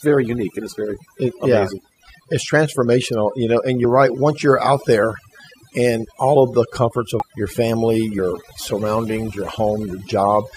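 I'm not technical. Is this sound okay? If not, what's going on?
No. Two problems can be heard in this speech recording.

The first runs through the whole clip: overdone noise removal. A noise-cleaning tool was pushed too hard. It shuts off any slice of the sound that resembles background hiss, so the gaps between phrases fall to near silence with twinkling specks, and the quieter parts of the voice are removed as well.

The second is damaged data in a compressed stream, heard as three short glitches: at 3.83 s, from 7.20 to 7.22 s right after "all of the comforts", and at 8.18 s. At each point a small piece of the compressed file was corrupted. The playback software can't read that piece correctly and has to find its place again, so a brief chirp or blip replaces the speech.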